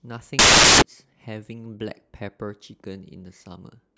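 Samples built from the wrong bytes run from 0.39 s to 0.82 s of this speech. Across that stretch the reader assembles each sample from misaligned or swapped bytes, so the rapidly changing low-order bits end up carrying most of each value. The result is a burst of loud, harsh broadband noise, before clean playback resumes at 0.82 s.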